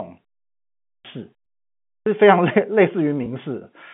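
It's a short speech recording on a telephone-band line. There's a clipped start after a pause twice: at 0.77 s and again at 1.79 s, the speech jumps in abruptly after roughly half a second of silence, with about 0.28 s of its beginning gone each time, as though the playback device had dozed off and needed time to wake. Then there's packet loss with pitch repetition at 1.44 s and 3.24 s: a 20 ms gap, which fits a single lost packet, gets patched by repeating the last pitch cycle, so you hear a brief buzzy hold.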